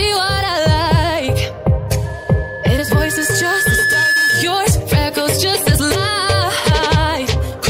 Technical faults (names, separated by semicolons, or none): loudspeaker feedback squeal